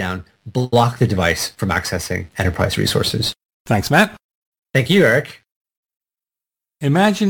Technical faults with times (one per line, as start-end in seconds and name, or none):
0.00-7.29 crude rate conversion